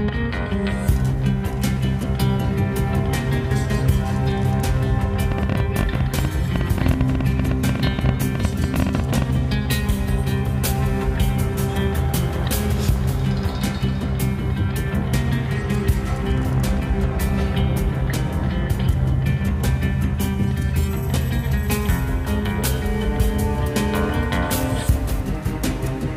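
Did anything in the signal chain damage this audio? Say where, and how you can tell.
Yes. From 5.32 to 9.23 s there's a train of clicks, around fifty same-shaped pops at an uneven pace averaging 13.6 per second, standing maybe 15 dB above the audio. The likely source is nearby equipment coupling interference into the analogue wiring, or a faulty connection or power supply.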